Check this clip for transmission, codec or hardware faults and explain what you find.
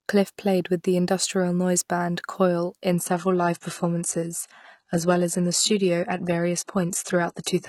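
One transmission fault is present. From 2.92 s onward, a slowed connection drops the adaptive stream to a lower bitrate: treble drops, spectrogram suddenly empty above 11.8 kHz, no gap.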